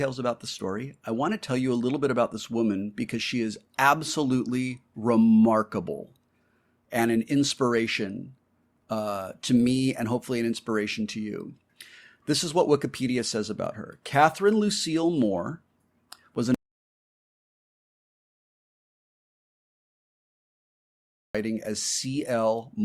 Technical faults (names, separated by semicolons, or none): audio dropout to silence